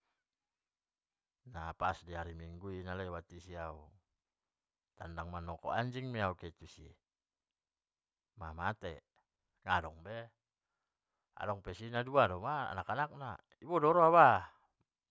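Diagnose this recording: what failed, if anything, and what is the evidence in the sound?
Nothing in this speech recording points to a failure at any stage of the chain. No event in the sound marks a fault at any particular moment or stage.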